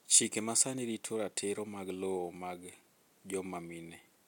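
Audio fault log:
No faults are heard anywhere in this speech recording. Nothing in the audio stands out as a technical problem.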